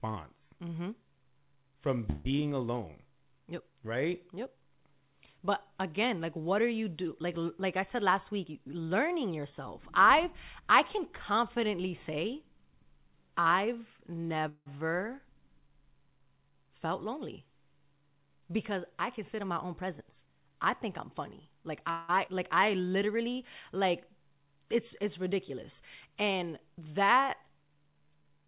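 Call audio freezes occur at 2.10–2.27 s, 14.49–14.68 s and 21.90–22.10 s, each a fading buzz of 150 to 180 ms, the second ending in 60 ms of silence. The likely cause is held-up packets emptying the jitter buffer, after which the sound resumes where it stopped. Jitter buffer speed-up runs from 7.65 to 10.02 s at 106% and from 18.92 to 21.14 s at 108%, trimming pitch periods to remove about 150 ms and 200 ms. The speech sounds hurried at unchanged pitch. At 22.26–22.29 s a skip ahead drops roughly 70 ms, joining both sides almost directly. Jitter buffer slow-down at 22.60–22.93 s repeats pitch periods, adding 37 ms and slowing the speech to 91%. The whole clip passes through a G.711 call path, so nothing above 4 kHz is present.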